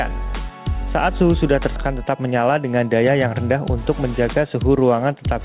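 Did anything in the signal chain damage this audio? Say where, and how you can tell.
Yes. At the network and jitter buffer stage, a skip ahead occurs at 1.76 to 1.78 s. Playback jumps forward with no fill. About a second of audio is missing. That stretch was dropped and the two sides were joined almost directly.

Jitter buffer speed-up follows from 2.04 to 4.04 s. The audio runs about 7% fast, yet pitch stays the same. The receiver trimmed pitch-period slices, roughly 150 ms in total, to drain a buffer that had grown too deep. It sounds hurried.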